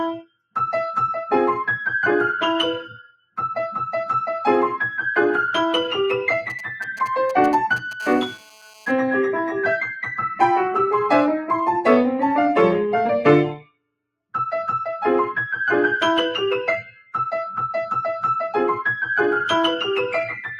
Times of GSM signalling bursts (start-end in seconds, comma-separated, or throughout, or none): 6.50-8.01